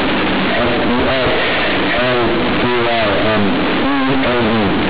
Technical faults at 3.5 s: companded audio read as linear

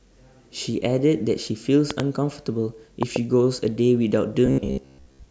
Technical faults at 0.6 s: none

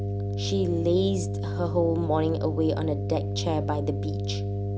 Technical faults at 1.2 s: mains hum

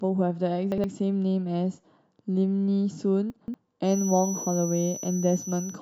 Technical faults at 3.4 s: chunks out of order

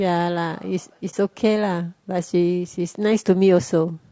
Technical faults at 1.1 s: low-delay AAC compression; AAC frame loss with muting

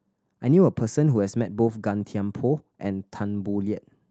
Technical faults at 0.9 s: none

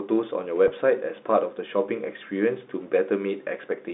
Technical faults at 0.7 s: packet loss with pitch repetition

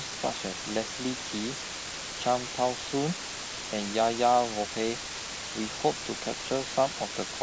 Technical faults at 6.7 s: low bit depth with dither

